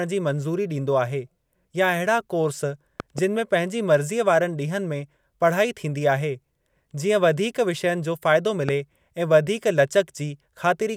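Speech with loud pops: a double pop at 3.00 to 3.20 s and one at 8.69 s after "जो फ़ाइदो", roughly 10 dB above the speech. They are likely electrical transients and show as waveform spikes and full-height spectrogram stripes.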